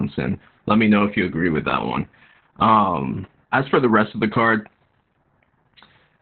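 Speech, heavily marked by Opus voice compression from start to finish. Nothing is left above about 4.2 kHz. The codec has dropped to narrowband, so the voice sounds muffled and boxed in. Its linear-prediction mode models the vocal tract well but codes the excitation coarsely here. That makes the speech hoarse and faintly robotic. The depth of damage points to a very low bitrate, which fits about 8 kbps.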